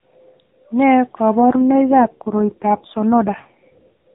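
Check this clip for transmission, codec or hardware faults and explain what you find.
One transmission fault is audible. From 1.41 s to 4.13 s there is an AMR rate drop: the link forces the codec into a lower mode, consistent with 4.75 kbps, so the speech turns rough and synthetic.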